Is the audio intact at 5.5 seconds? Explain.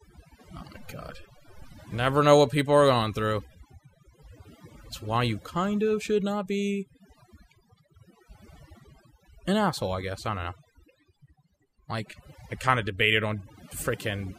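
No. At 5.5 seconds, as throughout the clip, overdone noise removal is audible: the reduction pulls frequency bands near its noise estimate down to nothing, taking quiet speech detail too. The background drops and breaks up into twinkling specks; a spectrogram shows isolated flickering dots.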